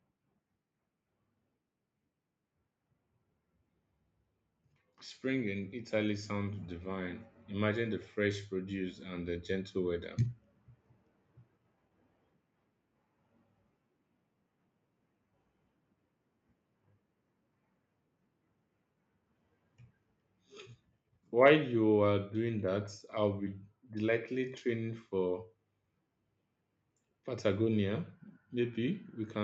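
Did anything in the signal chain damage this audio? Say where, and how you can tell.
Yes. Automatic gain rising in the call processing stage: from 5.52 s to 9.82 s the speech and the background noise swell together by about 6 dB. The AGC judged the input too quiet and raised its gain gradually, lifting everything at once.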